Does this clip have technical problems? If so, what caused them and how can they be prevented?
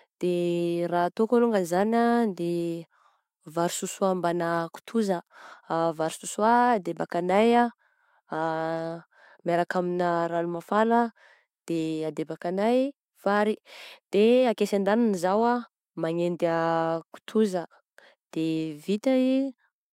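No, there are no technical problems in this clip.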